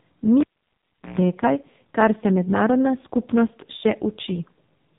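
From start to finish the speech sounds thin, buzzy and synthetic, with no content above about 3.8 kHz. This is the AMR narrowband mobile codec at work. It rebuilds each 20 ms frame from a vocal-tract model excited by a handful of pulses and discards everything beyond the telephone band. The damage is heavy, which fits one of AMR-NB's lowest modes, around 5 kbps, where too few pulses remain to carry natural texture.

At 0.40 s a sharp pop cuts the sound to near silence for roughly 0.74 s. During the dropout a 60 Hz mains buzz lasting about 0.13 s breaks through, and then a second pop brings the sound back at 1.19 s. This is a cable pulled and plugged in while live. The buzz comes from the plug tip touching the socket before the ground connection is made, and each pop marks the contact breaking or making.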